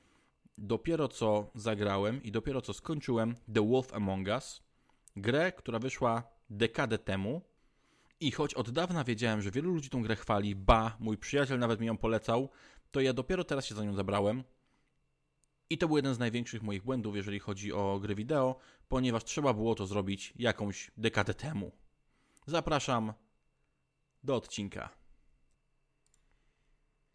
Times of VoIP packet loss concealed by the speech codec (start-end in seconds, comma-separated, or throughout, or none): none